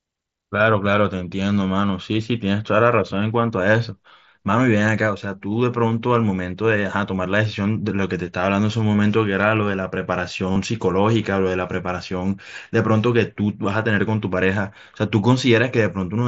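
Concealed Bluetooth headset packet loss at 10.52 s: about 38 ms of lost audio was filled by repeating recent waveform, giving a brief buzzy held tone before speech resumes with a slight warble.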